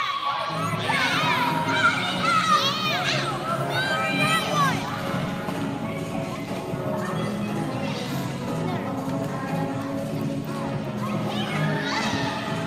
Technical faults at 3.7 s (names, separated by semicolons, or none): none